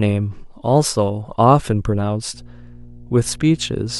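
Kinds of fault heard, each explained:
Mains hum: power-line coupling adds a steady 60 Hz tone from 2.34 s onward, about 25 dB below the speech, showing as a constant horizontal spectrogram line.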